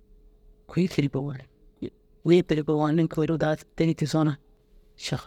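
No technical faults can be heard anywhere in the recording; the speech signal holds steady throughout, with no disturbance to its level, timing or continuity.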